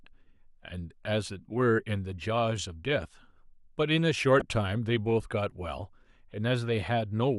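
At 4.39 s the speech is interrupted by a short glitch, heard as a chirp, squeak, blip or burst of noise. It lasts about 40 ms and ends by 4.44 s. This is a corrupt frame decoded. Bits inside the compressed stream were flipped, yet the decoder played the data anyway. Misread gains and codes placed energy at frequencies that do not belong there. The length suggests roughly two damaged frames. The burst peaks around -20 dBFS.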